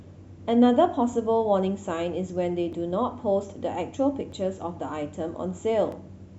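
From 1.13 s to 5.92 s the speech clicks every 1.6 s, likely clock drift buffer slips dropping or repeating a few dozen samples.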